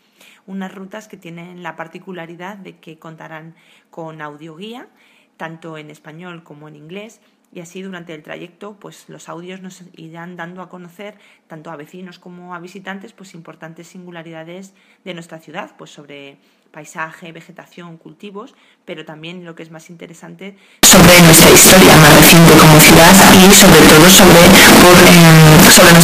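Float read as integer, from 20.83 s to the end at 26.03 s: the audio jumps to a harsh, very loud, nearly square waveform at an almost fixed, high level, with background noise as loud as the rest. This is likely 32-bit float samples misread as 32-bit integers.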